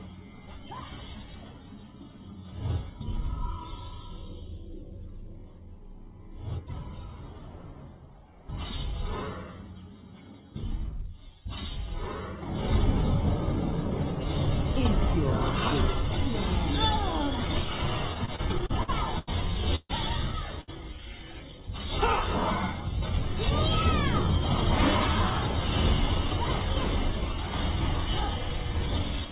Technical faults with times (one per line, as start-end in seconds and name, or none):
18.14-19.29 repeated stalls (stutter)
19.75-19.91 call audio freeze
20.61-20.70 short stall from a late packet